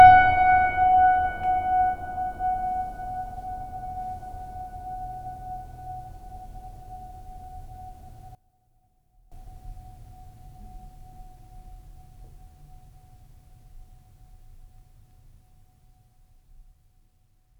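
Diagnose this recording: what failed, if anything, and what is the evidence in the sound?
From 8.35 s to 9.32 s the music suddenly drops by about 20 dB and comes back just as abruptly. That sounds like one channel inverted, likely at the analogue wiring stage, with a leg of one side's connection flipped so its polarity is reversed. Summed to mono, everything common to left and right cancels, and all that survives is the difference between the channels. Because that difference is so small here, the level falls this far for just under a second.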